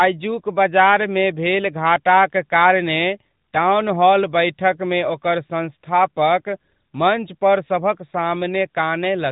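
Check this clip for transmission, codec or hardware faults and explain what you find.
The whole clip has passed through an AMR narrowband mobile codec. Throughout, nothing survives above 3.8 kHz, pointing to 8 kHz sampling. The speech is coded frame by frame as a vocal-tract filter excited by sparse pulses, and the plainly audible buzzy, synthetic edge fits a high-rate mode near 10 kbps. A spectrogram shows a hard ceiling with empty space above it and grainy, smeared harmonics below.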